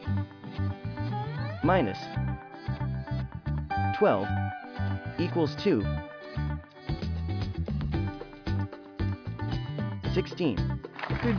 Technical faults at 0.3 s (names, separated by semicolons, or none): none